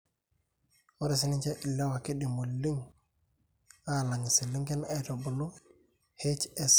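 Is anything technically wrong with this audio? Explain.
No technical faults are audible.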